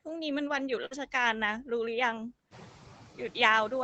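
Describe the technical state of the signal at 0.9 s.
Burst of packet loss, 0.85 to 0.94 s: at 0.9 s the signal sits inside a short gap of about 53 ms where packets failed to arrive in time. The receiver bridged it by extending the last decoded sound and turning it down as the gap went on, giving a held, fading tail. Sound resumes at 0.94 s with roughly 60 ms of the original audio missing, so the flow jumps forward.

Noise suppressor artifacts are also present at this moment, as everywhere in the clip. The suppressor judges, frame by frame, which frequency bands hold steady background noise and pulls them down by about 12 dB. The noise floor therefore drops in the pauses and comes back up beneath the speech, so the background audibly pumps with the talking rather than staying level.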